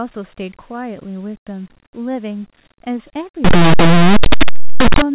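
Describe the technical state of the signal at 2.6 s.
At 2.6 s the speech signal is intact, with no fault present.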